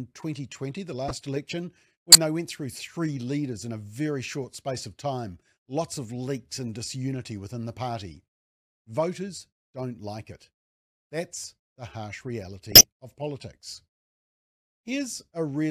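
Corrupt frames decoded at 1.08–1.11 s, 2.11–2.15 s before "they went through three", 4.44 s after "leaders in a very", and 12.72–12.84 s after "the harsh". Damaged frames were played anyway, misplacing energy in frequency. Each is a brief chirp or noise burst, loudest at 2.1 and 12.7 s.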